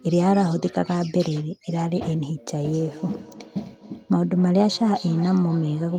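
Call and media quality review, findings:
Feedback echo between two devices, 2.64 to 5.98 s. Speech returns about every third of a second, peaking about 17 dB below the direct speech. Second device in the room replays far-end audio into the mic, and the local echo canceller doesn't remove it.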